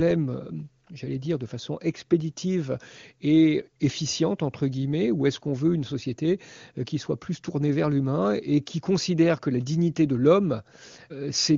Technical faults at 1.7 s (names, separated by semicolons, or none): none